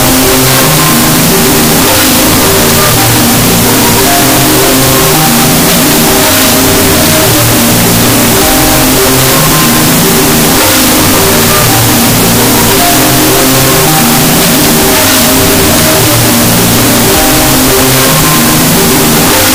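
From the first moment to the end, the audio has a wrong sample width fault: 16-bit data read as unsigned 8-bit. Each sample splits into two, so playback runs at 0.5x speed, an octave low. The low bytes become loud hiss, while the high bytes carry a coarse, distorted trace of the original, warped further by the signed-to-unsigned mismatch. A plain sample-rate error would slow the sound without the noise, and a byte-order swap would bring noise without the slowdown.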